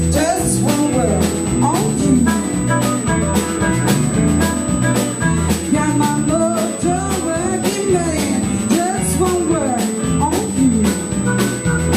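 From start to finish a steady, high-pitched USB whine sits at 8 kHz, roughly 10 dB below the wanted sound. Current pulses from the bus's 125-microsecond microframes leak in through power or ground. A spectrogram shows an unbroken horizontal line at 8 kHz.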